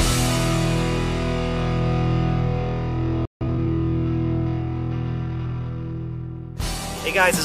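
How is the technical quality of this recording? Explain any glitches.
Two linked glitches interrupt the recording around the 3-second mark: a playback stall followed immediately by time-compressed catch-up.

From 3.25 to 3.41 s the sound cuts out in mid-flow for about 154 ms. The cause is likely a playback stall, where the player ran out of buffered data or its thread was blocked, so output fell silent until it recovered.

From 3.41 to 3.71 s the player is working through the backlog left by the stall, cutting out small pieces and cross-fading the remainder to shorten it. The result is time-compressed catch-up: the audio runs 1.5 times faster, hurried but at normal pitch.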